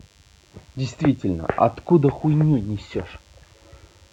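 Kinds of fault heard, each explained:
DECT cordless phone buzz: a thin, steady buzz sits under the speech the whole way through, pulsing at 100 Hz with a stack of harmonics. That's a nearby DECT handset or base firing a radio burst every 10 ms, rectified by the audio circuitry, sitting roughly 40 dB down.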